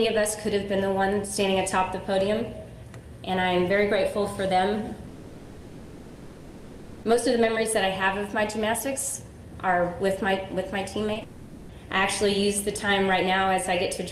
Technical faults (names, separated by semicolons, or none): long network dropout; short concealed packet loss